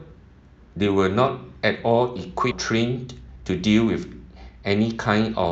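At 2.51 s a skip ahead occurs: with later speech already queued, roughly 0.7 s of audio was dropped and the two sides were joined directly, with no fill. Playback lurches forward, and part of the speech simply vanishes at an abrupt seam.

From 2.73 to 3.44 s, and again from 4.49 to 4.83 s, a jitter buffer speed-up follows. The buffer held more audio than it targets, so it repeatedly removed pitch-period-sized slices, about 100 ms and then about 70 ms in total. Speech runs at 112% and then 115% of normal speed at an unchanged pitch, sounding briefly rushed. All of this comes through an Opus call path whose top end stops at 8 kHz.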